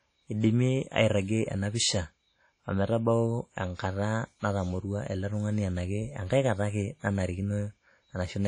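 Across the whole clip, the speech has most likely been through WMA compression at a low bitrate, and the damage is plainly audible. The encoder's long transform blocks let quantisation noise smear over tens of milliseconds around each syllable, and weak spectral detail has been zeroed out. Nothing is present above 10 kHz, which fits a rate of around 32 kbps. The result is ringing, washy speech with a hiss that swells and fades along with the talker.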